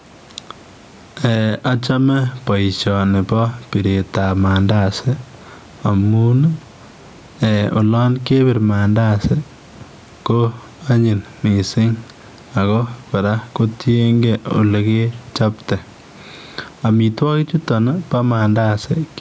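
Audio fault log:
throughout: gain pumping. The gain swings by around 10 dB, likely from gain set far too high feeding a fast limiter. The waveform looks squashed, with evenly capped peaks.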